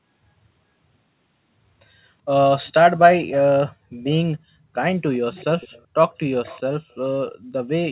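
Faint echo leak at 5.34–5.84 s, 6.44–6.61 s and 6.91–6.95 s: a quiet copy trails the speech by 383 ms, likely from incomplete echo cancellation.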